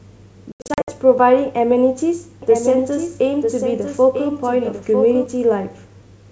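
Speech over a wideband call, with clear sound up to about 7 kHz that points to G.722 at 64 kbit/s. From 0.52 to 0.92 s, hard-edged gaps totalling 240 ms, the longest 80 ms, break up the audio, followed by slightly distorted speech: packet loss on an ADPCM call, around ten packets, knocking the decoder's predictor out of step. From 2.42 to 5.26 s a second full-band copy, roughly 5 dB quieter, trails about a second behind and starts and stops abruptly, likely a doubled audio track from a slower second capture path.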